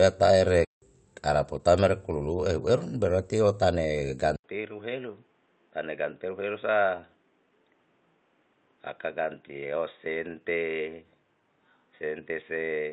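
In this speech clip the sound cuts out abruptly from 0.65 to 0.82 s, a gap of about 170 ms, then resumes with "araputa mere kululu ehu". This is a playback stall, most likely the player running short of data or its thread being blocked until it caught up. After "eru berarti o tane", at 4.36 s, there is an 80 ms silence, and from there to the end the audio turns dull and boxy, roughly 5 dB quieter and with a new noise floor about 40 dB below the signal. This is the input switched to a poorer device, likely a narrower-band microphone or a headset's call profile.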